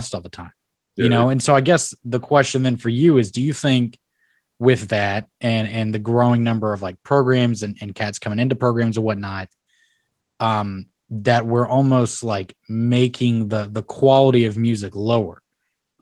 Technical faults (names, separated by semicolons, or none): none